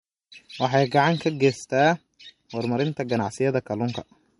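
A speech clip with plainly audible codec damage throughout. Nothing is present above 11.2 kHz. The likely cause is MP3 compression at a low bitrate, around 47 kbps. Short of bits, the encoder drops weak frequency lines frame by frame and cuts the treble.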